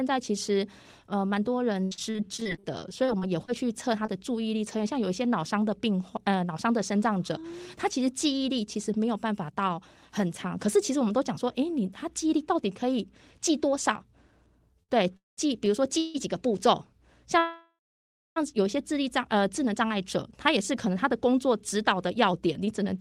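From 1.83 to 4.09 s there is repeated packet loss, heard as a robotic sound. Fifteen short holes break up the audio, the longest 78 ms. Each is patched by stretching the last sound. This gives a choppy, robotic texture, and about 0.34 s of the speech is simply missing.

Repeated stalls (stutter) run from 14.83 to 16.16 s. Packets arrived too slowly, so playback ran dry three times, the longest wait 161 ms. The last sound is held over each wait. Nothing is lost, but the speech drags and stutters.

Inside that stretch, at 15.17 to 15.39 s, the call audio freezes. The last sound carries on briefly, then about 0.17 s of silence follows. The speech then resumes where it stopped. The cause is likely held-up packets emptying the jitter buffer, which puts a gap of about 0.21 s into the audio.

A longer call audio freeze comes at 17.39 to 18.38 s. The sound hangs, then goes silent for about 0.62 s. 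It picks up again with nothing missing. Roughly a second has been added to the timeline.

From 19.5 to 22.97 s a jitter buffer speed-up is heard. The receiver trims tiny pitch-period slices again and again to shed the built-up delay. Around a fifth of a second goes in total. The speech plays at 105% speed at the same pitch and sounds slightly hurried.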